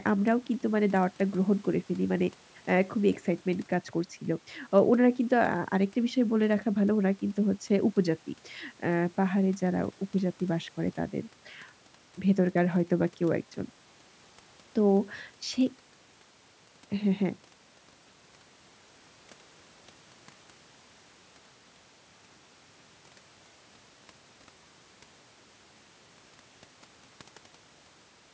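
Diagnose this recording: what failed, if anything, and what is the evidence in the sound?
Nothing failed; no faults present.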